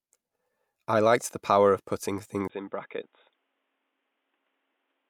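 After "the power of putting", at 2.48 s, a 20 ms gap, then duller, quieter speech capped at 3.8 kHz with new noise: likely an input switched to a poorer device, not plain filtering.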